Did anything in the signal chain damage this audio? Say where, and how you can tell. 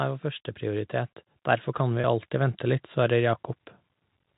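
Yes. From 1.76 to 3.49 s, speech and background swell together by about 6 dB. This is automatic gain rising in call processing, as gain control lifts a quiet input.

From 2.01 to 2.04 s, a brief held, buzzy tone bridges the speech. This is packet loss with pitch repetition: the receiver repeated the last pitch period across a 30 ms network gap, which fits one lost packet.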